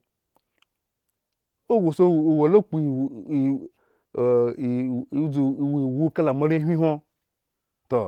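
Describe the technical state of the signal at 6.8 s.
At 6.8 s the audio is intact, with no fault present, and the Opus voice compression carrying the speech there adds only light coding damage.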